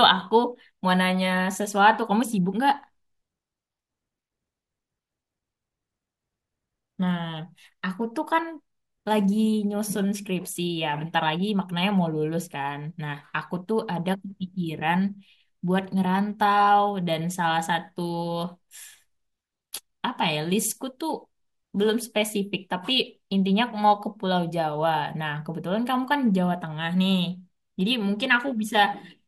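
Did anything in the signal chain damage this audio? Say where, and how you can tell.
No, nothing along the chain, from capture through to playback, leaves an audible mark on this speech recording.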